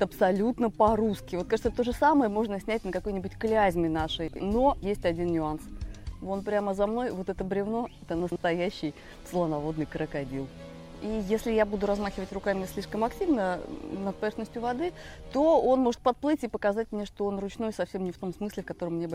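At 4.28 to 4.40 s and again at 8.20 to 8.36 s, chunks play out of order: a 40 ms chunk lands two, then three, chunks late. Each spot sounds briefly jumbled. The waveform shows three abrupt discontinuities at each spot, and the spectrogram shows thin vertical broadband lines at those joins.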